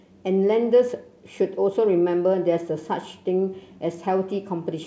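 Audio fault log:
Nothing stood out on listening to this speech, which passed through a G.722 call path that leaves nothing above 8 kHz.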